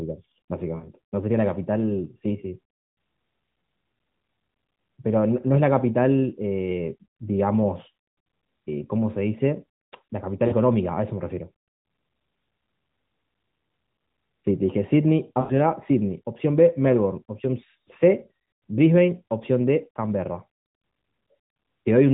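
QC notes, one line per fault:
0.76–0.89 s, 10.48–10.54 s, 15.40–15.53 s: lost AMR speech frames. The decoder stretches the last good sound over 60, 40 and 100 ms gaps with falling gain, giving short smeared, fading dips.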